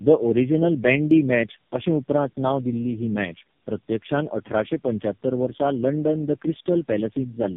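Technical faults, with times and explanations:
Throughout: tandem speech coding. The speech sounds rough, muffled and warbly, with a gritty, smeared edge on every syllable and nothing above 3.5 kHz. This degradation is heavier than one narrowband coder would give, which fits three low-rate speech codecs in a row, such as G.729A and then AMR-NB twice, decoded and re-encoded at each link. Each stage models speech already distorted by the one before, so the errors compound.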